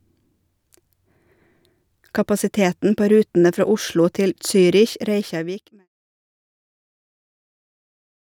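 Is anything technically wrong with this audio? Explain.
No, nothing is technically wrong with this audio; the speech simply fades out smoothly from around 5 s to 5.89 s.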